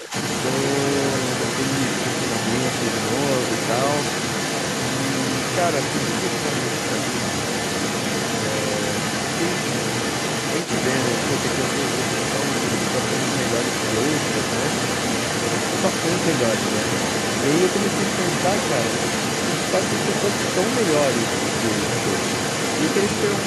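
From the very start, 0 to 0.13 s, the speech is suppressed in double talk: the talker's level dips by roughly 10 dB while another voice overlaps. The likely cause is an echo canceller that could not separate near-end speech from loudspeaker echo and attenuated both.

The other side's voice leaks through for the whole clip, at roughly the same level as the talker. A second voice stays audible under and alongside the main speech, likely because the echo canceller left loudspeaker playback in the microphone signal.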